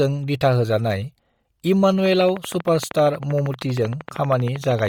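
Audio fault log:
throughout: Bluetooth LC3 compression. The speech has a breathy, grainy edge, and the upper band sounds coarse and hissy rather than detailed. This is most likely heavy LC3 coding at a low rate, consistent with around 32 kbps in 10 ms frames. The encoder discards much of the upper spectrum and fills it with noise. On a spectrogram the high band looks smeared and blotchy, with structure broken into 10 ms blocks instead of clean harmonics.
2.06–4.88 s: train of clicks. A steady ticking sets in and runs to the end at about 12.8 clicks per second, evenly spaced, around forty in all. Each click stands roughly 10 dB above the speech and is audible in pauses as well. The clicks are alike in shape, which likely points to interference or a struggling interface. The waveform shows a comb of identical sharp spikes, and the spectrogram shows a row of thin vertical lines spanning the full band.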